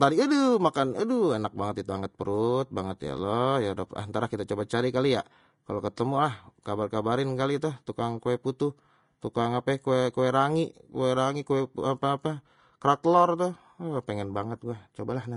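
From start to finish the speech carries plainly audible Vorbis compression damage, likely from a low-rate encode that sounds consistent with roughly 34 kbps. Nothing survives above about 10.6 kHz, and the treble below that limit has been quantised so coarsely that sibilants turn hissy and grainy while consonant attacks blur. On a spectrogram the energy stops at a flat ceiling near 10.6 kHz, with speckled, noise-like patches in the upper bands.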